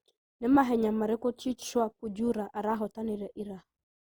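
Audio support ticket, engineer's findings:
Generation loss, throughout. Likely cause: speech re-encoded about three times through a lossy codec, consistent with a 48 kbit/s Opus chain. Each pass requantises on a shifted frame grid, so noise and spectral holes compound. Result: swirly, smeared, hollow tone beyond what one pass at that rate would give; consonant attacks blurred. Bandwidth still reaches about 20.2 kHz, so the damage is texture, not lost top end.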